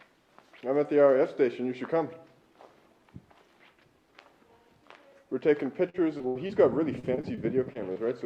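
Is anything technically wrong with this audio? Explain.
Yes. Repeated packet loss (robotic sound) occurs from 5.89 to 6.51 s and from 6.99 to 7.97 s. Short holes, up to 76 ms and then 38 ms, are patched by extending the previous sound, giving a choppy texture with pieces missing. Unlike a single dropout, the holes recur in quick succession.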